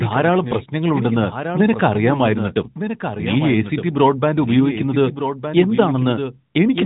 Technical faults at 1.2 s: doubled audio track

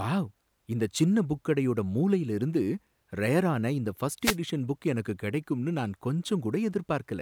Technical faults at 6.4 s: none

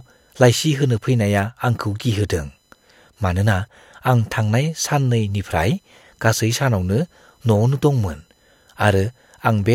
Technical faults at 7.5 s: computer activity noise

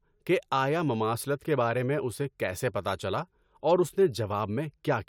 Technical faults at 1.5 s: clock drift buffer slips

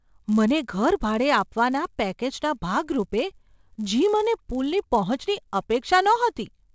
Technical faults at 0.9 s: resampler restarted on every block

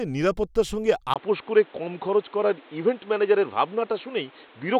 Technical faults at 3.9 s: input switched to a poorer device

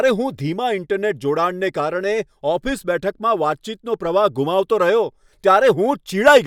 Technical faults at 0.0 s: none

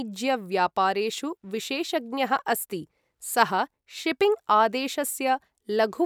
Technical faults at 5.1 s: none

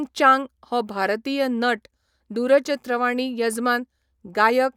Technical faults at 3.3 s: none

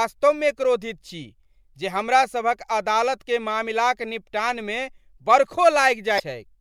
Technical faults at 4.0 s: none

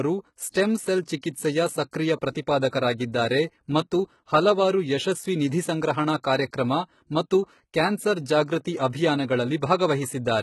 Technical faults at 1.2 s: HE-AAC compression; pre-echo

